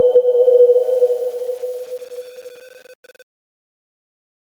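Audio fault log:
Throughout, gain pumping: the gain ducks under every loud sound, swinging about 10 dB. Loud and soft parts sit close in level, so the sound is squashed. Input gain set far too high, with a fast limiter, is the likely cause.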